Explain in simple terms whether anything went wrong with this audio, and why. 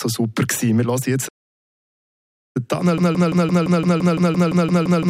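Two things went wrong. First, a playback stall: the player most likely ran out of data or was held up, so from 1.28 s to 2.57 s the sound simply stops, leaving about 1.3 seconds of silence before it picks up again.

Second, a system hang loop: the computer froze while the sound hardware kept replaying its last chunk of audio. From 2.98 s to the end, one 171 ms piece repeats 17 times, about six times a second, a stuttering sound that hides roughly three seconds of audio.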